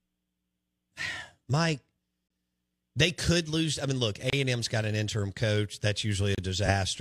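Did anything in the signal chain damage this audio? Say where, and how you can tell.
Yes. There is a gap between stream segments, a playback-stage fault in how consecutive segments are joined. Hard-edged silent holes cut the speech at 2.28 to 2.30 s, 4.30 to 4.33 s and 6.35 to 6.38 s, lasting about 25, 28 and 31 ms. They repeat roughly every 2 s, which fits 2-second segments whose timestamps leave a small space that the player fills with silence. Nothing is removed; the audio is pushed later.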